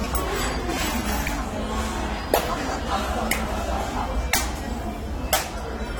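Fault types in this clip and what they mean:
AAC compression: dull, smeared sound with fizzy warbling throughout, likely AAC-LC around 32 kbps; the warble, not a clean cut-off, separates it from low-pass filtering.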